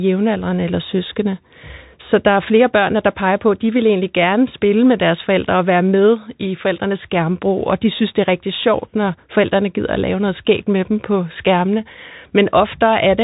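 Speech heard throughout through the Bluetooth CVSD headset codec: nothing passes above about 3.8 kHz, s sounds turn scratchy, and a granular hiss sits under the speech, consistent with a 64 kbps one-bit delta stream whose adaptive step lags. A plain low-pass filter would dull the sound but leave no grain.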